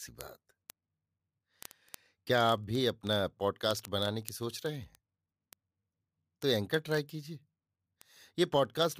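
It's a speech clip with word clock ticks from 0.12 s to the end, a steady patter of sharp clicks roughly every 30 ms, a few hundred in all. Two unlocked clocks are drifting apart, which suggests a mismatch of several hundred ppm, so a single sample gets dropped or repeated at each slip.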